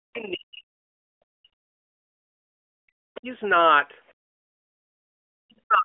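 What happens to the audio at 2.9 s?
At 2.9 s the voice is near the end of a dip from 2.57 to 2.94 s, where it falls very deeply, close to silence. This is likely speech suppressed in double talk: an echo canceller mistook the talker for loudspeaker echo and attenuated both.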